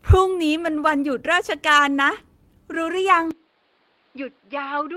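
At 1.73 s (20 ms) and 2.95–3.01 s (40 ms), one lost packet and then two lost packets were rebuilt from error correction: low-bitrate copies fill each gap, sounding rougher and noisier.

From 3.31 s to the end, the speech abruptly turns duller and quieter, with no silence at the switch. This is likely the input switching to a poorer device. The spectrogram shows nothing above 5.3 kHz and a new noise floor, while the waveform drops roughly 10 dB.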